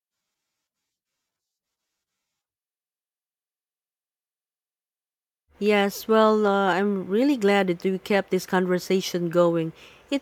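No technical faults can be heard anywhere in this speech recording.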